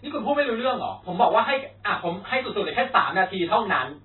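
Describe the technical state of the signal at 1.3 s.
At 1.3 s the speech carries the same heavy coding damage present across the whole clip, most likely MP3 compression at a very low bitrate, consistent with roughly 16 kbps. Starved of bits, the encoder has cut everything above 4 kHz and discards weaker frequency lines, which drop in and out between frames. The result is dull, band-limited speech with a watery, swirling texture, chirpy sibilants and softened consonant attacks.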